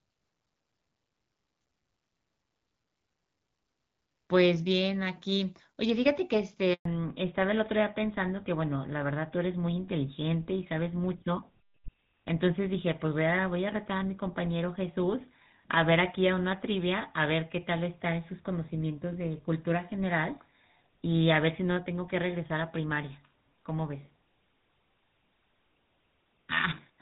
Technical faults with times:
6.73-6.85 handover gap
6.85-27.02 fallback to narrowband

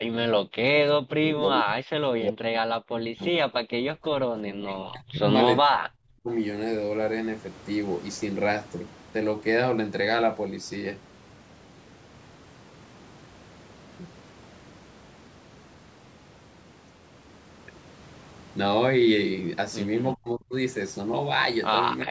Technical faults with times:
0.00-3.46 speech suppressed in double talk
4.61-5.23 speech suppressed in double talk
5.61-6.28 speech suppressed in double talk
20.15-20.53 speech suppressed in double talk
22.04-22.10 speech suppressed in double talk

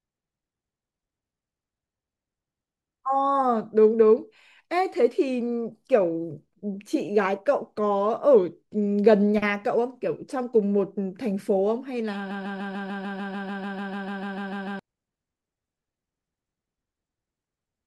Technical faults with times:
12.31-14.79 broken-record loop

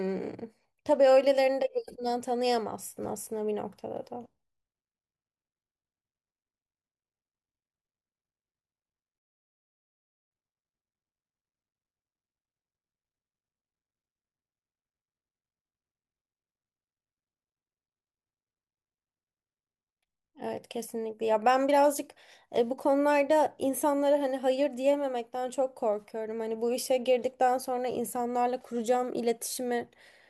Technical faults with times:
9.19-10.31 one channel inverted

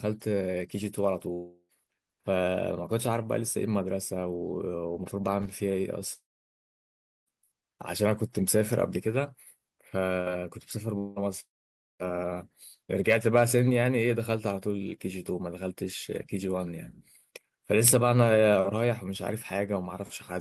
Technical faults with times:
1.33-1.72 long network dropout
6.13-7.29 long network dropout
10.98-12.02 long network dropout

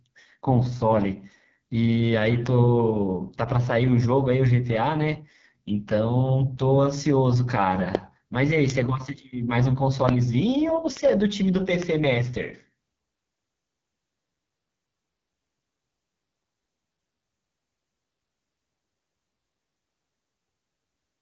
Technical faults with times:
0.00-21.22 AMR wideband (HD Voice) codec

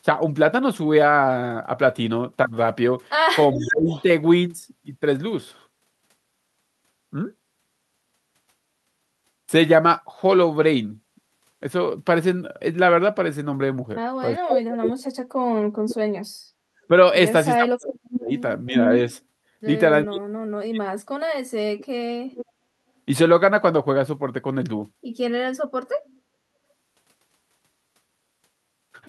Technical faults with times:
3.52-4.03 echo leak
3.53-3.92 speech suppressed in double talk
14.37-16.90 speech suppressed in double talk
16.82-16.86 background gated by the echo canceller
17.57-18.75 speech suppressed in double talk
17.88-18.17 echo leak
20.05-22.43 speech suppressed in double talk

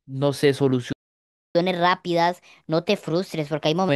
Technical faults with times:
0.92-1.55 playback stall
1.55-3.89 catch-up at higher speed

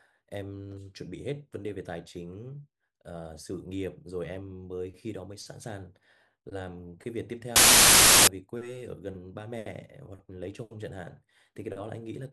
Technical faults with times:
7.56-8.27 samples built from the wrong bytes

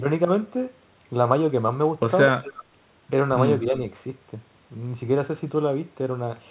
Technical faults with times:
2.37-2.64 echo leak

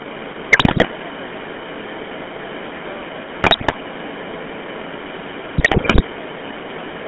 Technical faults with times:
0.00-7.08 GSM full-rate codec
0.00-7.08 echo leak
0.52-0.87 GSM bit errors
3.40-3.75 GSM bit errors
5.58-6.03 GSM bit errors

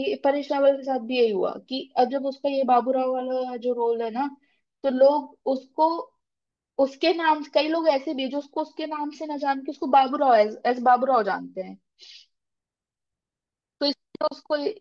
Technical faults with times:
none

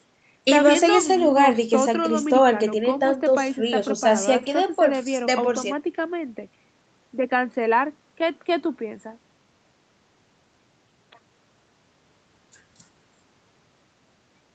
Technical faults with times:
none

